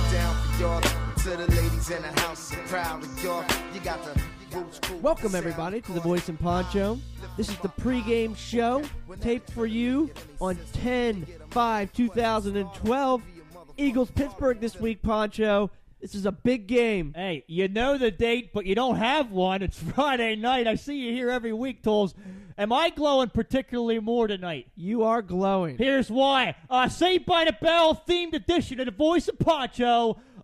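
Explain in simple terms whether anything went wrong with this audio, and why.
Nothing went wrong with this audio, and there is no technical fault to be heard at any point in it. Everything comes through as it should, so there is nothing here that needs fixing.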